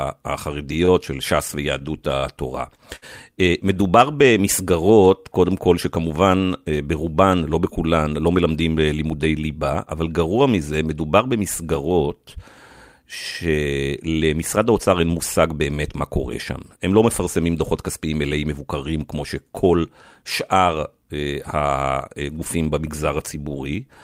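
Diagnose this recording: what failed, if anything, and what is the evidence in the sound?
Repeated packet loss (robotic sound) at the network stage runs from 0.85 to 3.05 s. Across that stretch there are six separate gaps, the longest about 59 ms, and each is papered over by extending the preceding sound, about 183 ms of patched audio in total. About 120 ms of real content never arrives. The closely spaced repeats of held fragments give the choppy, mechanical texture, with bits of speech dropped out between them.

A short stall from a late packet, also a network and jitter-buffer issue, follows at 3.74 to 3.79 s. A packet missed its playout slot, the buffer ran dry, and the receiver stretched the last sound by about 21 ms until it turned up, then resumed exactly where it left off. Nothing is lost. The evidence is a brief held sound with a slight buzz or dip, and playback is about 21 ms later from then on.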